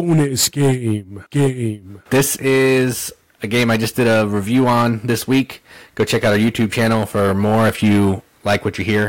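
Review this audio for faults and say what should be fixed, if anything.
Hard clipping affects the whole speech clip. Driven about 12 dB over, roughly one sample in twenty is flattened, adding harsh fuzz on loud syllables.

Prevent it by lowering the gain so peaks stay below full scale at every stage.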